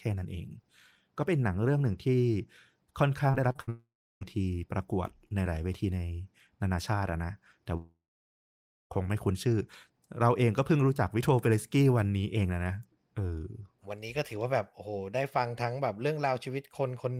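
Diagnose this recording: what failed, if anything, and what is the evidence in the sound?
Repeated packet loss (robotic sound) sets in at 3.31 s and runs to 3.69 s. Five short holes open in quick succession, the longest 54 ms, and each is bridged by stretching the preceding sound. About a third of that span is concealment rather than real audio, which gives it a choppy texture with fragments missing. This is a network-stage fault: packets arriving late or not at all, repaired by the receiver's loss concealment.

Two long network dropouts follow, with the network the likely cause. The first runs 3.69 to 4.23 s, directly after the choppy patch. Roughly 0.52 s of audio never arrives, the carried-over sound decays, and about 0.34 s of silence remains. The second, 7.77 to 8.92 s, loses about 1.14 s, of which about 0.93 s is silent. In both, audio resumes later without the lost material.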